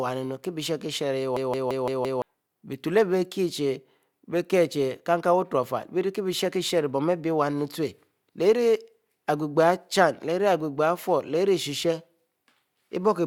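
A speech clip with a system hang loop from 1.37 to 2.22 s. One 171 ms slice repeats exactly five times, a stutter at about 5.9 Hz. That fits a frozen system replaying an 8192-sample ring buffer. Roughly a second of speech is lost.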